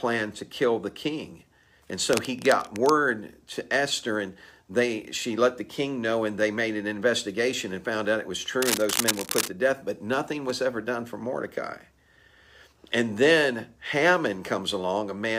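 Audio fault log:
2.13–2.90 s and 8.62–9.52 s, cable scratch noise: scratchy rustling bursts, first about 10 dB below the sound, then roughly as loud, likely from a worn connector being moved.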